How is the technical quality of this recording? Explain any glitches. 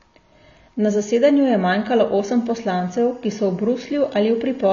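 The recording has two audible faults: a dull, smeared compression texture throughout and a faint chirping tone in the second half.

For the whole clip the speech sounds muffled and fizzy, with nothing above 6.9 kHz. This is likely AAC compression at a low bitrate, around 24 kbps, where the encoder drops the high band and coarsely quantises what remains, so sibilants warble.

From 2.43 s, just after "zasedanju je manjkalo osem", to the end, a steady chirping warble sits faintly behind the speech, roughly 40 dB down. This is timecode bleed: square-wave timecode leaking in from an adjacent line, toggling between tones near 1 and 2 kHz, with a rhythm that fits 23.976 fps code.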